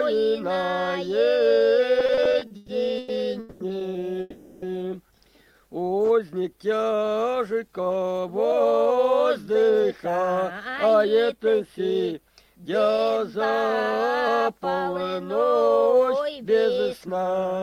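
Repeated stalls (stutter) run from 1.99 to 3.12 s. Packets kept arriving behind the playout rate, and the jitter buffer emptied nine times. Each time the receiver stretched the last sound to fill the wait, the longest hold lasting 120 ms. About 380 ms of filler covers roughly a third of that span, so the audio drags and stutters with nothing lost.

Call audio freezes follow at 3.39 to 3.63 s and at 4.20 to 4.65 s, held for 210 ms and 420 ms. Each is likely a packet hold-up that drained the buffer. The last sound carries on as a fading buzz or hiss that never reaches silence, and playback then resumes where it stopped, shifted later.

A jitter buffer slow-down at 5.39 to 5.61 s plays the audio at 86% speed with unchanged pitch. The receiver repeated single pitch periods or bits of pauses to rebuild its reserve, adding 38 ms, so sounds come out drawn out.

Jitter buffer speed-ups appear at 7.34 to 10.60 s, at 110% speed, and at 15.68 to 16.45 s, at 112%. 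The buffer held more audio than its target, so short pitch-period slices were cut repeatedly. About a third of a second is removed in the first stretch and about a tenth in the second, making the audio sound hurried at the same pitch.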